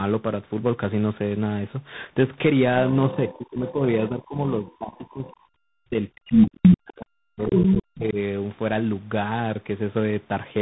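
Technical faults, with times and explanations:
Throughout: tandem speech coding. Three speech codecs in a row, ending in what sounds like CVSD, each re-code the last one's damage, leaving rough, noisy sound with nothing above 3.8 kHz.
2.92–5.33 s and 5.8–8.19 s: speech suppressed in double talk. The echo canceller, likely confused by both sides talking at once, pulls the talker down by about 20 dB, then about 40 dB, for roughly two seconds each time.
2.93–3.72 s, 4.66–5.36 s, 6.27–6.77 s and 7.47–7.71 s: other side's voice leaking through. A second voice, likely loudspeaker echo the canceller missed, is heard at about 15 dB and 25 dB below the talker, then about 10 dB above and about equal.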